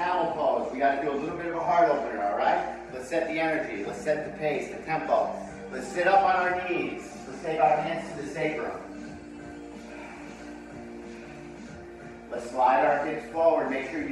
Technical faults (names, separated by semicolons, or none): none